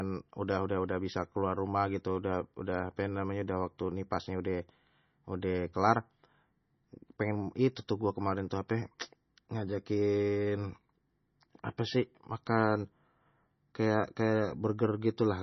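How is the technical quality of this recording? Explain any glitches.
Quality's poor, with heavy codec damage running through the whole clip. It's likely MP3 compression at a very low bitrate, roughly 24 kbps: nothing above 5.9 kHz, and weak detail flickers, leaving the speech watery and swirly with smeared attacks.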